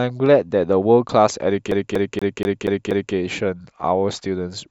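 From 1.71 s to 3.15 s the speech locks into a CD stuck on one turn: the same 0.24 s slice of audio plays six times in a row, each pass ending in a brief mute as the pickup jumps back to the same spot on the disc. It sounds like a rapid, perfectly even stutter. On a waveform the segment shows identical blocks repeating at 0.24 s intervals, separated by thin gaps; a spectrogram shows the same pattern tiled across time with narrow vertical breaks.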